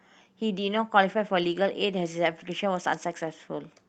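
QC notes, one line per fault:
1.43–1.57 s, lost packet rebuilt from error correction: there is no gap, but about 80 ms of speech turns rougher and noisier. Packets were dropped. The decoder played the low-bitrate copies carried in the packets that followed, which fits four separate Opus packets.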